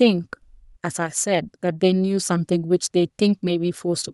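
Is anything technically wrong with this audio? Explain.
Yes. At 1.35 s there is a single sharp click in the speech, most likely from dropped samples: a couple of samples, a few hundredths of a millisecond, went missing from the stream, so the waveform leaps straight from one value to a later one instead of moving smoothly between them. That gap is far too brief to remove any audible sound, but the abrupt step in the waveform appears as a thin vertical line running across the spectrogram.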